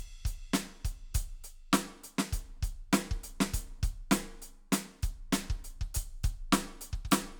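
No technical faults are audible.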